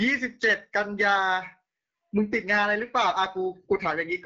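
Speech passed throughout through an AMR wideband (HD Voice) codec at a low rate, consistent with 8.85 kbit/s, leaving it rough and raspy, with nothing above 7.7 kHz.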